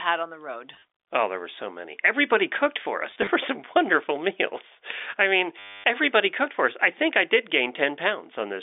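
At 0.74 to 0.82 s after "on the road", 3.11 to 3.27 s after "cooked for", and 5.59 to 5.84 s before "everybody cooked for us", packet loss with last packet repeated causes robotic stuttering. The receiver kept replaying the last short slice of sound, which fits 10 ms packets. The longest run, a quarter second at 5.59 s, buzzes near 100 Hz. On a waveform these show as identical copied blocks. A spectrogram shows frozen, evenly striped patches.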